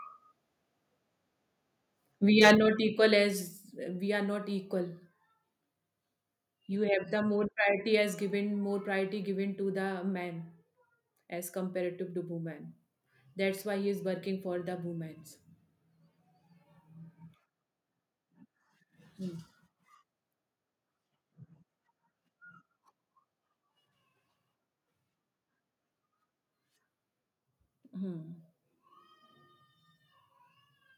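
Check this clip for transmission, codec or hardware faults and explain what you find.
Two related hardware-side faults occur close together early in the speech.

From 2.38 to 2.53 s the loudest syllables take on a harsh, crackling edge, with peaks running about 7 dB past the converter's limit and roughly one sample in twenty flattened at that limit. This is microphone overload, likely from an input level set too high, so the converter squares off the waveform tops. Unlike codec distortion, which smears across frequencies over time, this crackle follows only the peaks and vanishes as the level falls.

At 2.55 s the whole signal, voice and background together, drops by about 5 dB in a single step and stays there. That is the microphone volume stepped down, likely the call software reacting to the overloaded peaks just before it and cutting the device's input gain. It differs from automatic gain control or a limiter, which ride the level smoothly or pump with the speech. 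Here there is one abrupt drop with no recovery.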